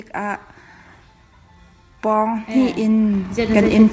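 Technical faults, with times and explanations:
2.02 to 3.92 s, automatic gain rising: the gain control judged the input too quiet and lifted it about 10 dB, so voice and background swell together.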